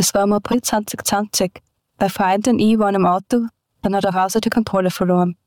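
At 0.51 to 0.54 s and again at 3.83 to 3.85 s, the sound skips forward with a brief glitch lasting about one MP3 frame. This is likely a broken MP3 bit reservoir: after missing frames, the decoder borrowed bytes from the wrong frame.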